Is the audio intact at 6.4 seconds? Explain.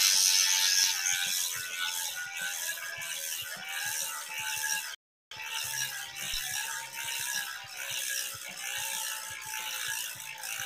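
No. A phantom power thump runs from about 6.34 to 6.41 s. A supply was switched on or off on the live input, and the voltage step passed through the coupling capacitors. It is heard as a deep thump that dies away in about 16 ms.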